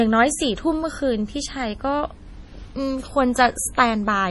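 From start to finish the speech carries heavy MP3 compression damage, likely from a low bitrate near 32 kbps. Nothing survives above 11.5 kHz. Weak frequency lines drop in and out between frames. The sound turns watery and swirling, with smeared onsets and metallic s sounds.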